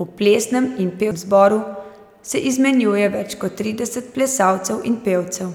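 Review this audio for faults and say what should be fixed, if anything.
At 1.11 s, just after "plesnem in", there is a CD skip: a knock or a flaw on the disc threw the laser onto another turn of the spiral, so the player lost its place. It muted for only a few milliseconds and then resumed reading from a different point on the disc. In the speech this comes across as a brief tick followed by an abrupt jump in the flow, as if a sliver of the recording has been cut out or repeated. To prevent it, clean and inspect the disc, and isolate the player from shocks during transfer, or rip the disc with an error-checking ripper instead of capturing real-time playback.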